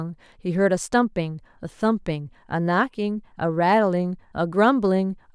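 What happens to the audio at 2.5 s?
Nothing goes wrong at 2.5 s; the speech runs through that moment intact, with no dropout, click or other fault.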